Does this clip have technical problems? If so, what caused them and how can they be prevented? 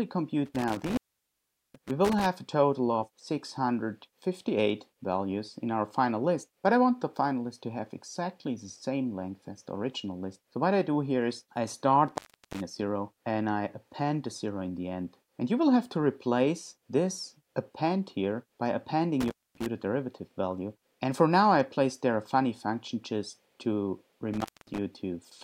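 Yes. The sound drops out four times, each gap bracketed by crackle and filled by faint hiss: from 0.46 to 2.26 s (the line open for about 0.77 s), 12.08 to 12.61 s (0.37 s), 19.21 to 19.67 s (0.23 s), and 24.34 to 24.79 s (0.21 s). This is intermittent contact, where a loose cable or plug briefly loses connection, breaking the signal path and scratching as it makes and breaks. Securing or replacing worn cables and connectors before recording prevents it.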